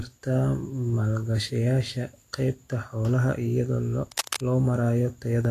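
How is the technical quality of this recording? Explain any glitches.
Technical quality is compromised by two faults, one running through the whole recording and one brief glitch near the end.

Throughout, the speech has likely passed through Vorbis compression at a low setting, with the damage plainly audible and consistent with a bitrate around 35 kbps. The encoder removes everything above 14.2 kHz and quantises the remaining treble coarsely, so fine detail turns into hiss and grain, tones roughen and consonant attacks blur.

From 4.12 to 4.41 s, cable scratch noise appears, likely from a worn cable, connector or control whose contact resistance fluctuated as it moved. That produces a burst of dense, uneven scratching over the speech, only a few decibels below the speech level, lasting about 0.3 s.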